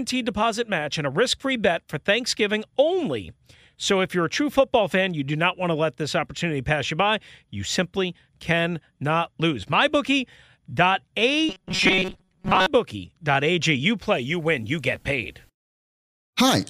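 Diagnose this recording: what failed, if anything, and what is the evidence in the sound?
Robotic sound from repeated short buffers, 11.49 to 12.67 s. The speech turns into a rigid metallic buzz at 188 Hz, which fits a segment of about 5.3 ms looping. Most of that span is repeated fill. The likely cause is a driver or buffer stage starved of data.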